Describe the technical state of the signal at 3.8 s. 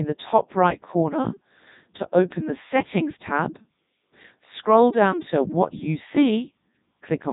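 At 3.8 s the speech is passing through the Codec 2 vocoder, as it does throughout. Only pitch, voicing and envelope survive, resynthesised from sine waves, so it sounds heavily buzzy and robotic, consistent with the 3.2 kbit/s mode, with nothing above 3.8 kHz. Unlike plain band-limiting or transform-codec warble, the waveform itself is rebuilt.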